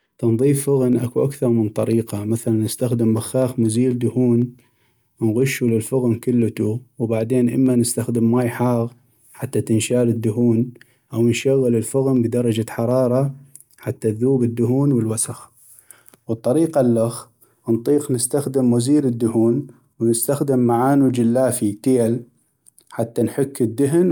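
From 0.18 s to 16.66 s, periodic USB or driver dropouts put a tick into the speech every 0.25 s. Each time, a fraction of a millisecond of audio is skipped. Unlike random clicks, they keep a strict rhythm and fall silent in pauses.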